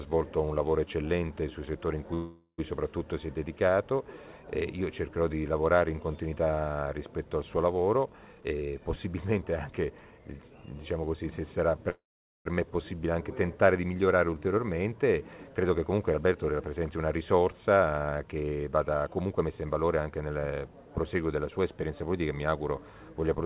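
Two call audio freezes stand out, at 2.14 to 2.60 s and 11.90 to 12.47 s. Each time the last sound is stretched into a fading buzz and then silence (briefly in the first, nearly half a second in the second) before the audio picks up where it left off, most likely from delayed packets draining the jitter buffer. There are also three jitter buffer speed-ups, at 8.32 to 10.20 s (123%), 15.63 to 16.37 s (113%) and 18.72 to 20.48 s (125%), where the audio sounds hurried at the same pitch as the buffer trims pitch-period slices to shed roughly 0.4 s, 0.1 s and 0.4 s of delay. Everything is band-limited at 4 kHz with some coding grit, which fits 64 kbps G.711 mu-law.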